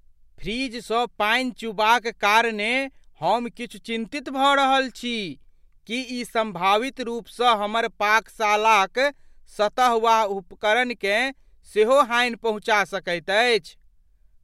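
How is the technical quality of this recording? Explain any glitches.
No audible glitches or faults.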